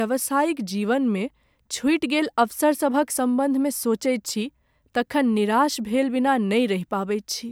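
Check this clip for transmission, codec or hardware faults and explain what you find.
No transmission, codec or hardware fault is audible anywhere in this speech recording.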